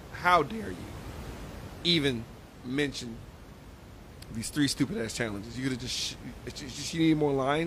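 No technical faults are audible in this recording.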